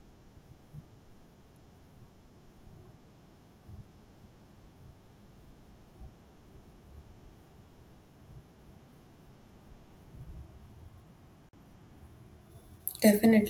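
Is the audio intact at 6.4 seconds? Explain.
Yes, the speech at 6.4 seconds is intact, with no fault at that moment.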